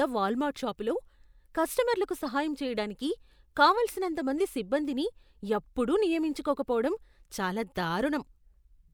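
At 2.25 to 2.28 s, just before "చేయడానికి కావలసినంతమంది సిబ్బందిని ఎప్పుడూ", a corrupt frame decoded gives a short glitch peaking around -30 dBFS, and a quieter glitch, around -40 dBFS, follows at 6.69 to 6.73 s. Each lasts about one or two frames, and flipped bits drive misread gains and codes into the wrong frequencies. Unlike concealed loss, which dulls or smears the sound, these put energy at the wrong frequencies.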